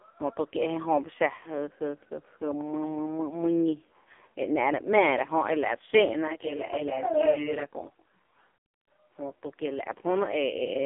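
The speech throughout sounds thin, boxed-in and buzzy, with a synthetic, slightly metallic edge and no air or sibilant brightness. Nothing is heard above about 3.6 kHz, and the low end is cut too, leaving roughly a 250 Hz to 3.5 kHz telephone band. This is heavy AMR narrowband mobile codec damage: the voice has been rebuilt from a crude vocal-tract model and sparse pulses, and the harshness points to one of the lowest AMR-NB modes, around 5 kbps. At 8.56 s the audio cuts out mid-flow and stays silent for about 0.31 s before resuming at 8.88 s. That gap is likely a playback stall, where the player ran short of data or was blocked and output nothing until it caught up.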